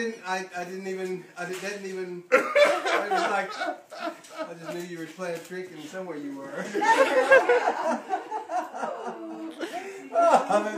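Nothing here calls for comment; the audio runs along without any technical fault to point to at any moment.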